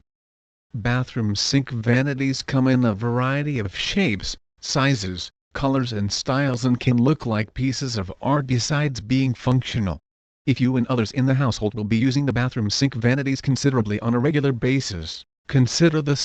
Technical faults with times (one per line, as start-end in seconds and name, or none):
1.92-1.96 corrupt frame decoded
7.21-7.24 corrupt frame decoded
9.87-14.45 time-stretched section
15.11-15.14 corrupt frame decoded